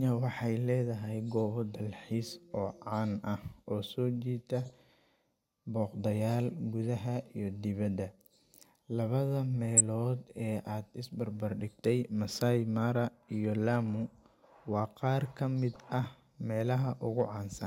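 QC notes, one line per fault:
4.66–4.70 s, 9.77–9.81 s and 15.73–15.76 s, corrupt frame decoded: brief glitches, the first just after "so jiita", the 9.77 s one loud, the others faint. Damaged compressed frames were played anyway, placing energy at wrong frequencies.
17.2 s, hard clipping: a short crackle on a peak, as the level overdrove the stage by about 1 dB and the waveform tops were cut flat.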